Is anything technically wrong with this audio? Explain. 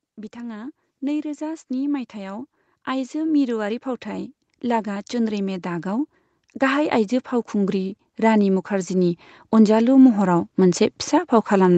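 Yes. There are two automatic gain rising faults in this speech. The first runs from 0.33 to 6.03 s and lifts the level by about 11 dB. The second runs from 6.58 to 10.88 s, adding about 8 dB. In each case the gain control judged the input too quiet and kept raising its gain slowly. Voice and background noise swell together, so the room seems to creep closer. The call path's 8 kHz ceiling is expected.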